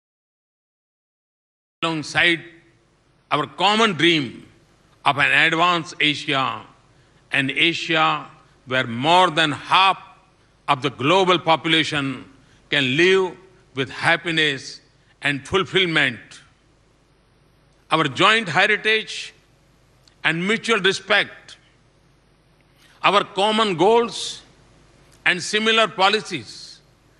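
The clip opens with about 1.83 s of dead digital silence, then the sound lurches in at 1.83 s already in full flow, with no attack or fade-in. This is a cut-off start: capture or streaming began late, joining the audio partway through an ongoing sound.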